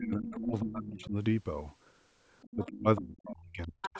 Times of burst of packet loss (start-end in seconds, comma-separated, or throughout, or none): none